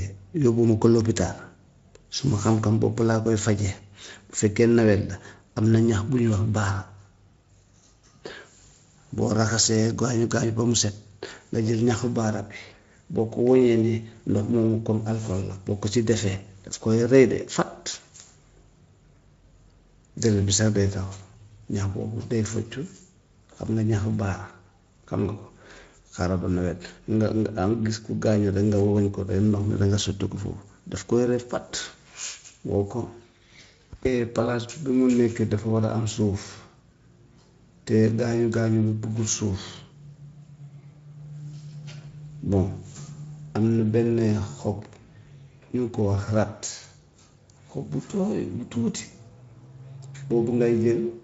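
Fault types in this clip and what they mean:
VoIP packet loss concealed by the speech codec: at 8.27 s and 17.91 s, a 20 ms gap is filled by the decoder extending its last pitch and spectral shape. It is heard as a brief buzzy or noisy, fading smear rather than the silent hole of a plain dropout.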